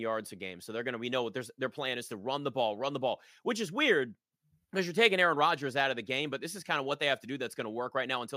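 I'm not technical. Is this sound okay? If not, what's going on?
Yes, it sounds fine.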